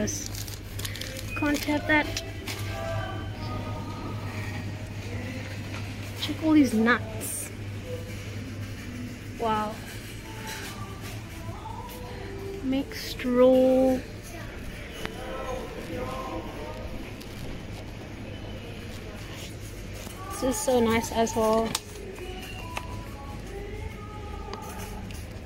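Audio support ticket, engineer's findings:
Damaged data in a compressed stream: short chirp/blip at 3.46 s, around 14 ms. Decoder likely hitting corrupt frame bytes, losing sync, resyncing on the next header. Spectrogram: thin broadband vertical smear. Waveform: brief discontinuity spike.

Same fault at 18.56 s, again about 14 ms. Same component suspected, with the decoder misreading or dropping the damaged frame before recovering. Visually matches the first event: narrow full-band stripe, abrupt waveform step. Check the source file or transport for corrupted packets.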